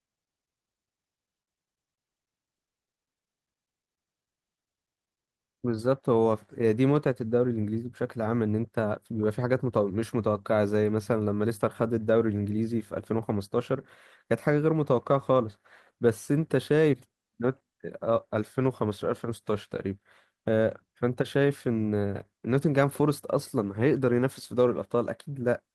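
No technical faults are audible.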